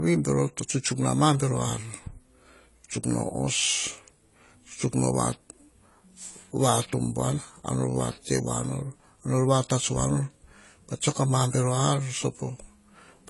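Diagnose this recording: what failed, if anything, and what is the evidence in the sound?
Low-bitrate audio saved at a high bitrate, present throughout the speech. The codec stage is at fault: the spectrum stops dead at 11.5 kHz, and the artefacts of the first encoding persist. This points to a likely first pass through a low-bitrate AAC-type encoder, then a re-save as high-bitrate MP3. The second encode keeps every loss the first one made, so its extra bits add size without restoring the missing detail.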